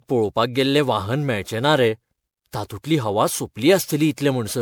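Across the whole speech clip the sound is swirly, smeared and hollow, with consonant attacks blurred beyond what a single lossy encode would cause. This is generation loss, likely from repeated MP3 coding, perhaps around seven passes, which fits a 128 kbit/s chain. Each re-encode requantised on a shifted frame grid, compounding noise and holes. A spectrogram shows patchy, flickering gaps between harmonics and nothing above 20.8 kHz, and the waveform's transients look softened.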